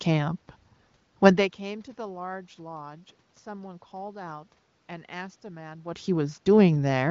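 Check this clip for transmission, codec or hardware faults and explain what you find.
Nothing stood out on listening to this speech clip.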